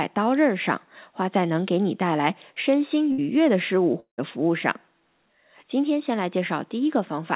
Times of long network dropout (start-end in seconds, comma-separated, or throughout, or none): 4.00-4.20